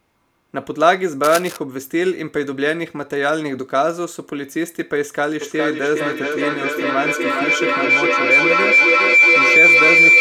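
From 1.24 to 1.57 s, a burst of cable scratch noise runs under the speech: dense, uneven crackling and rustling, roughly 10 dB below the speech. The likely cause is a worn cable, connector or control being moved, so that its contact resistance jumps about rapidly. Unlike a single click or a dropout, the signal never cuts out. It is a grainy scratch of about a third of a second laid over continuing speech.

At 5.41 s a feedback howl begins and runs to the end of the clip. Two devices in the same room are on one call, and the path from loudspeaker back into microphone adds level on each pass, so the repeats grow and narrow to a tone around 2 kHz. It pulses roughly every 0.4 s, the loop's delay, and peaks about 7 dB above the speech. Unlike a plain echo, it swells rather than fading.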